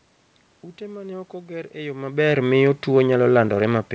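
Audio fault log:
No faults heard anywhere in the speech.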